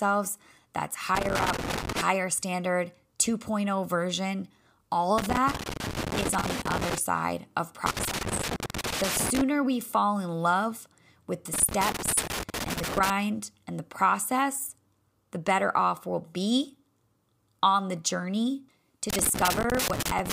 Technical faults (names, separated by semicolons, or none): loose connector crackle